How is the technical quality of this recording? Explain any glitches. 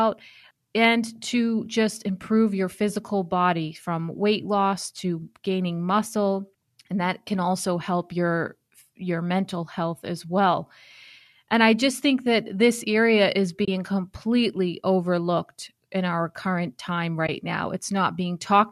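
The speech has two brief dropouts, both from AAC frame loss with muting. The first runs from 13.65 to 13.68 s (30 ms), after "area is" and before "completely overlooked in our". The second runs from 17.27 to 17.29 s (20 ms), after "in our current time". The decoder zeroed the missing frames, and the overlapping windows fade the sound out and back in. The result is a soft gap that fits two to three 10 ms frames. On a waveform it looks like a tapered notch, and on a spectrogram like a narrow vertical blank across all frequencies. The light coding texture is likely from low-delay AAC-ELD at 64 kbps.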